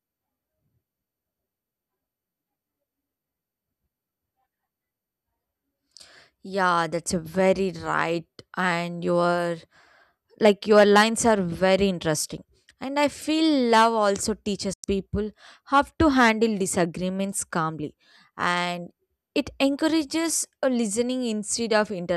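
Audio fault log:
14.73–14.84 s, digital broadcast dropout: right after "i feel love also" the speech fades out over about 8 ms into a silent hole of roughly 0.1 s, then picks up again further on. The receiver muted on bad frames; the gap fits four 24 ms frames lost, and that speech is gone.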